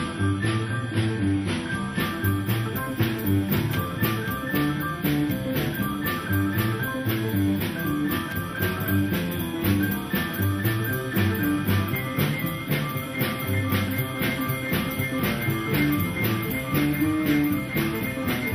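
For the first 2.0 s the audio plays at reduced quality, the signature of an adaptive stream starting at a low bitrate. Nothing reaches above about 11.4 kHz and codec artefacts are more pronounced, which fits a low-rate AAC version of around 32 kbit/s. At 2.0 s the quality steps up abruptly, with no gap, consistent with the player switching to a higher tier near 96 kbit/s once it had gauged the connection.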